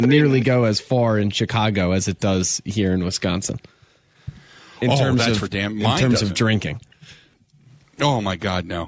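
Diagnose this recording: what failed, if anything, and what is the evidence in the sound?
From 0.01 to 0.45 s the speech is doubled by a second copy arriving about 0.31 s late and only around 5 dB quieter. This is likely an echo leak at the call-processing stage: the far end's loudspeaker was picked up by its microphone, and its echo canceller failed to remove that copy before sending it back.

Between 7.36 and 7.67 s the room background drops sharply, by about 40 dB, for roughly a third of a second, then returns. This is background gated by the echo canceller, in call processing: while the loudspeaker played, the canceller pulled the microphone down hard and released it afterwards.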